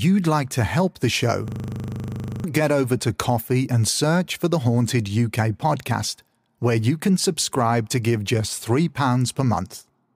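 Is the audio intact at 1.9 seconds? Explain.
No. From 1.48 to 2.44 s there is a system hang loop: the computer or its audio driver stalled, but the sound hardware kept replaying the same 40 ms stretch of its ring buffer. That single fragment repeats 24 times at 25 Hz, so at 1.9 s you hear a rough, mechanical buzz at the loop rate instead of continuing speech. About a second of the real speech never made it into the recording.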